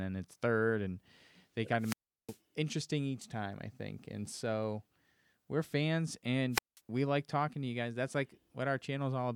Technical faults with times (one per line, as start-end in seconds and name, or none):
1.78-2.39 wireless microphone squelch dropout
6.51-6.80 wireless microphone squelch dropout